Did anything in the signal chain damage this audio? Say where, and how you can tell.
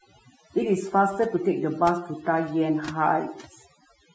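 Yes. Overdone noise removal runs throughout the speech. A suppressor set too aggressively drops individual frequency bands whenever they sit near its noise estimate, so the background collapses to near silence with twinkling specks, and quiet voice components vanish.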